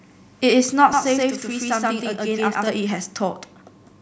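From 0.93 s to 2.67 s the speech turns doubled: every syllable is trailed by a second, equally loud copy landing 128 ms later, heard as a distinct slap echo rather than room reverb. This is a channel delay (doubling) fault. One channel has fallen behind the other by a long buffer, which fits a 2048-sample offset, and when the pair is summed to mono the late copy sits apart from the original instead of merging with it.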